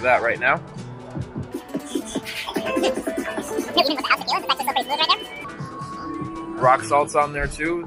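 From 1.52 s to 5.44 s the audio runs at twice its proper speed and sits a full octave (12 semitones) high, then returns to normal. This is a wrong sample rate fault: the samples are clocked out at double the rate they were captured at, with no resampling in between, so duration halves and pitch doubles together. The exact 2.0 ratio fits 24 kHz material being played back at 48 kHz.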